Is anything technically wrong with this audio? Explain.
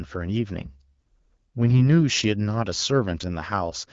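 Yes, there's a burst of AMR bit errors from 1.69 to 1.87 s. The less protected bits of a few frames got flipped, sounding like a few percent error rate, so excitation pulses and fine pitch and gain values go wrong. Pitch and level hold, but the sound turns hoarse, scratchy and gargly. The surrounding AMR-WB coding sounds fairly clean, which fits around 12.65 kbit/s.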